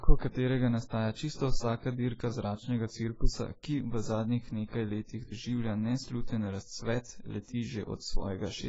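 Throughout the speech, the audio has likely been through AAC-LC compression at a very low bitrate, with damage heavy enough to fit roughly 16 kbps. Nothing survives above 7.7 kHz, so it sounds dull and smeared, with a warbling, fizzy texture on sibilants.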